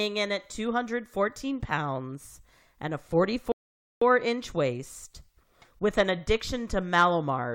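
At 3.52 s, right after "pounds and a", the speech cuts to silence and resumes at 4.02 s with "inch waist with an", exactly where it stopped. This rebuffering stall adds 0.5 s: the player ran out of downloaded audio and waited.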